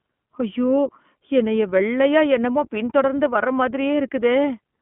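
A speech recording carrying the iLBC codec throughout, with plainly audible coding damage: the voice sounds rough and slightly synthetic, and a spectrogram shows energy confined to roughly 150 Hz to 3.4 kHz with nothing above. Each 20 ms frame's excitation is coded independently, which fits a 15.2 kbps iLBC stream. Between 2.16 and 2.22 s, just before "என்னமோ பின் தொடர்ந்து வர", hard clipping overdrives the peaks by about 3 dB. The waveform shows flattened tops there, and the spectrogram shows a brief burst of harmonic splatter heard as crackle.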